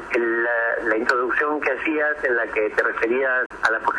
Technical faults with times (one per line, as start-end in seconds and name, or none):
3.46-3.51 Bluetooth dropout